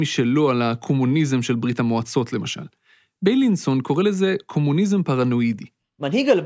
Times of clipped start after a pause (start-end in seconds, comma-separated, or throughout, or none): none